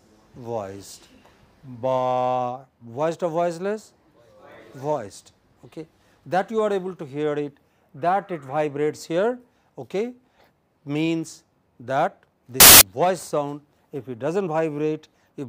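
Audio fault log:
12.60–12.81 s, samples built from the wrong bytes: for about 0.21 s the bytes of each sample are assembled wrongly, through a one-byte offset, swapped byte order or a mistaken alignment, so the rapidly changing low bits dominate each value, producing loud, harsh broadband noise.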